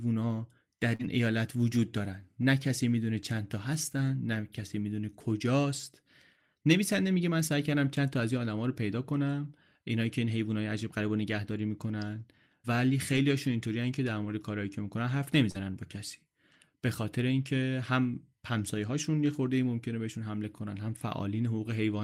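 At 0.95 to 1.01 s and 15.51 to 15.58 s, short concealed packet loss replaces about 40 ms of missing speech with extrapolated sound. It is heard as a brief smear, seen as blurred spectrogram harmonics, and the second gap adds roughly 10 ms.

Lost packets rebuilt from error correction at 0.99 to 1.05 s, 13.13 to 13.19 s, 14.25 to 14.31 s, 15.54 to 15.56 s and 16.53 to 16.55 s leave no gaps. Instead, rougher, noisier frames appear, with grainy spectrogram texture.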